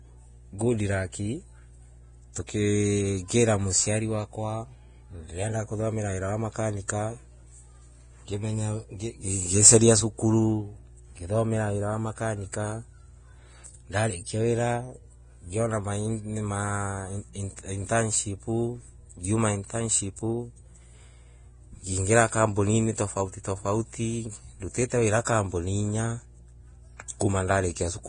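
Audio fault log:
throughout mains hum. A steady low tone sits under the speech at 60 Hz, roughly 25 dB below it. It does not change with the talking and stays the same from start to end. This is the sound of the power line leaking into the signal path, as happens with a ground loop or a transformer close to the cabling.
throughout Vorbis compression. The treble is hissy and grainy. Nothing is heard above 9.7 kHz, so the top of the spectrum is missing. The damage is heavy. Consonant attacks are smeared and tonal parts of the speech sound rough. This likely comes from low-quality Vorbis coding, at a rate that fits about 23 kbps. The coder drew in its cut-off and quantised the upper bands so coarsely that their fine detail turned into noise.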